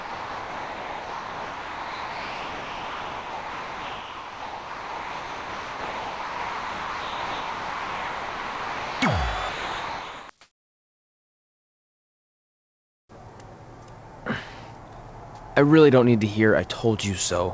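From 0.00 to 9.01 s, and again from 9.49 to 10.29 s, the sound is dropped, likely by the voice detector misjudging it as background. Steady comfort noise replaces it, so the audio gives way to steady noise or near silence until transmission resumes.

At 13.07 s, a sound begins abruptly without its soft start, likely an onset clipped by the voice detector. About 20 ms went unsent, filled with comfort noise, and the sound seems to snap on. Throughout, nothing is heard above 8 kHz, consistent with a G.722 call codec.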